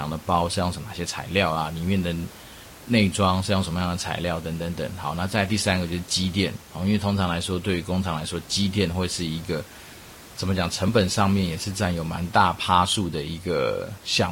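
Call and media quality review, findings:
Overlap between stream segments at 10.88 s. A brief skip in the speech. Segment boundary; timestamps of adjacent 6-second segments overlap, so the player trims a few milliseconds of non-duplicated audio and the waveform jumps. Room noise about 21 dB below speech.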